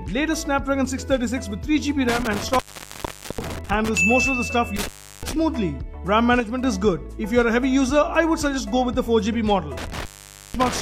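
From 2.09 to 3.89 s the sound cuts out with crackle at each edge, silent for about 0.8 s apart from faint hiss. This is intermittent contact, a loose plug or cable briefly opening the line. Between 2.62 and 2.67 s the level abruptly falls by about 6 dB, likely one channel dropping out so the mono sum loses half its shared signal. Similar crackly cutouts recur at 4.76 to 5.33 s (about 0.35 s open) and from 9.77 s to the end (about 0.5 s open), with another 6 dB dip at 6.40 to 6.64 s.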